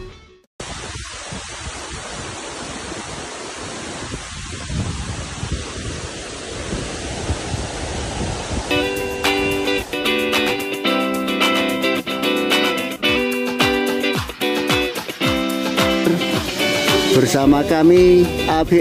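From 6.66 s to 12.96 s there's a doubled audio track: a second, full-band copy of the sound trails the original by about a second, a few dB quieter, with no room colour. It cuts in and out abruptly, likely from a second, slower capture path.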